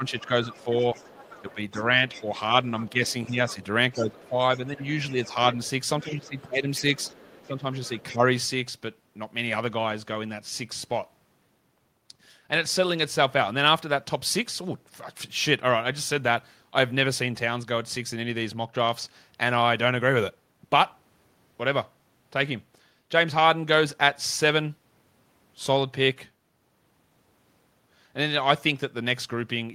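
Speech suppressed in double talk, 0.0 to 2.35 s: the voice dips by up to about 5 dB for roughly 0.7 s in total, likely because the echo canceller mistook it for loudspeaker echo.

Other side's voice leaking through, 0.08 to 2.23 s: a second voice sits about 25 dB below the talker, likely loudspeaker sound the echo canceller left in the microphone signal.

It leaks through again from 2.79 to 8.03 s, at about the same level.

Speech suppressed in double talk returns from 2.92 to 6.84 s, with drops of up to about 10 dB over roughly 1.5 s, and again from 7.45 to 8.21 s, with drops of about 10 dB over roughly 0.3 s.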